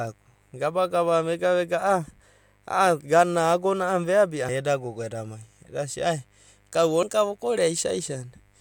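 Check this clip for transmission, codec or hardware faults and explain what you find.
Two faults are audible in this speech: a mains buzz running throughout, and two short glitches from damaged data in a compressed stream.

Mains buzz is present for the whole clip. Switching spikes from a dimmer, rectifier or poorly shielded cable are reaching the signal path twice in every 50 Hz cycle, and their sharp edges spread harmonics of 50 Hz up into the kilohertz range. The result is a steady, raspy buzz sitting faintly beneath the speech, around 40 dB below it.

Damaged data in a compressed stream shows up at 4.48 s, just before "ai eda gogo edam", and again at 7.02 s, right after "ai eda sia kau". At each point, part of the encoded stream is corrupt. The decoder misreads the affected frame, loses sync and skips ahead to the next valid frame header. Each event is heard as a brief chirp or blip lasting about 12 ms.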